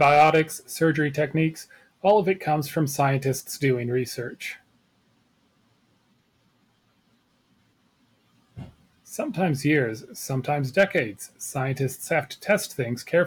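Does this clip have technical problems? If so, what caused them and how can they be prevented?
Yes, the speech has hard clipping at 0.01 to 0.40 s, just before "surgery techniques", with about 5 dB of overdrive; at 2.10 s, between "surgery techniques" and "of it comes from" (about 2 dB); at 10.79 to 10.98 s (about 4 dB); at 12.50 to 12.52 s (about 1 dB); and at 13.15 s, right at the limit. The peaks exceeded what the chain could pass and were sliced flat, giving crackle on the peaks. On a waveform the tops sit as flat plateaus; a spectrogram shows vertical smears of high-frequency harmonics at those moments. Setting input gain to leave around 6 to 10 dB of headroom, or using a limiter before the converter, prevents it.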